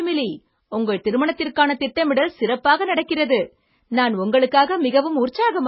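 From start to finish the speech carries heavy MP3 compression damage, with nothing above 5.5 kHz. Weak frequency lines flicker on and off between frames, giving a watery swirl and metallic chirps on s sounds that a simple low-pass filter wouldn't produce. A starved bitrate, around 16 kbps, is the likely cause.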